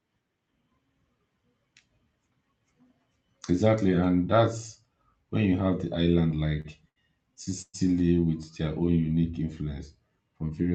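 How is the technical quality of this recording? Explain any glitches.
There's one real glitch: a stretch of stutter about two-thirds of the way in. It comes through a call-style Opus path, with the top end stopping around 8 kHz, which fits a modest bitrate of roughly 32 kbps.

From 6.31 to 7.76 s, just after "when you have the" and up to "with their own unique", you get repeated stalls (stutter). Packets showed up late, so the jitter buffer kept running dry, nine times here. Each time the receiver stretched the last bit of sound to cover the hole, up to about 119 ms on the longest one. Nothing is lost, but roughly a fifth of that stretch is filler, so the speech drags and hiccups.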